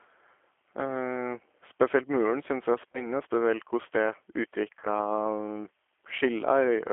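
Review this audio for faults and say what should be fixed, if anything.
The G.729 codec, an 8 kbit/s type, runs through the whole clip. It rebuilds speech from a vocal tract filter and a few pulses per frame, so the audio sounds plainly rough and synthetic. A spectrogram shows energy confined to a 300 Hz to 3.4 kHz band. Use a wideband codec such as G.722 or Opus where the link allows.

VoIP packet loss concealed by the speech codec occurs from 2.92 to 3.10 s, just before "spesielt koss", where about 20 ms went missing, which fits one packet. It occurs again from 4.79 to 4.86 s, where about 40 ms was lost. In both places the decoder extrapolated from its last pitch and filter with falling gain, and recovery lagged after the gap. The waveform shows repetitive, decaying periods, and the spectrogram shows smeared, flat harmonics. Reduce network loss with QoS, forward error correction or a larger jitter buffer.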